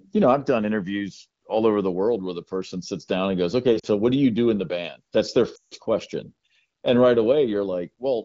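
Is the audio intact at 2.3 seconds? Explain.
Yes, the speech at 2.3 seconds is intact, with no fault at that moment.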